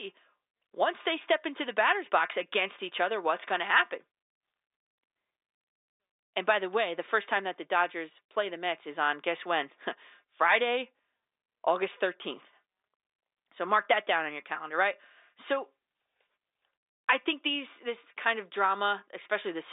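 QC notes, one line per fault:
No faults are present; the speech carries the narrow band of a G.711 mu-law telephone line, roughly 300 Hz to 3.7 kHz with nothing above 3.8 kHz, consistent with a 64 kbps line.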